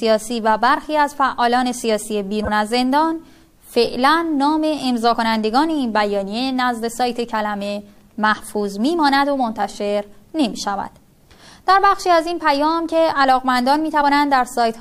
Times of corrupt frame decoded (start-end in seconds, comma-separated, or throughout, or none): 3.84-3.87